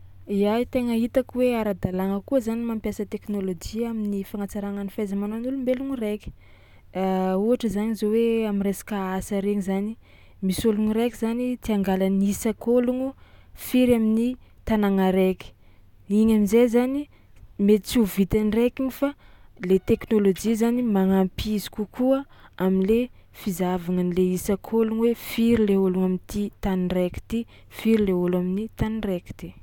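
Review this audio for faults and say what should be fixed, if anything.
Nothing here needs fixing, as no technical faults can be heard anywhere in this speech recording. There is nothing to correct or guard against.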